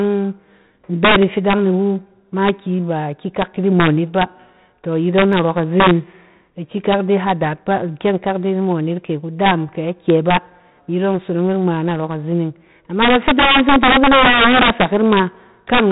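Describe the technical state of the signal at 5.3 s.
At 5.33 s a handful of samples, a fraction of a millisecond's worth, went missing from the stream, likely dropped samples, so the waveform jumps straight to a later value. Nothing audible is lost, but the jump produces one sharp click, a thin vertical line across the spectrum.

Integer overflow is present here as everywhere in this speech. The gain pushes peaks about 9 dB past the integer limit, and instead of being held, a small share of samples wraps to the opposite sign, so loud syllables carry violent cracks far harsher than clipping.

4-bit ADPCM compression, heavily applied and consistent with a 32 kbps stream, codes each sample as a coarse step from a prediction. Its error rides the signal level as gritty hiss, and the step lags on sharp onsets and distorts them.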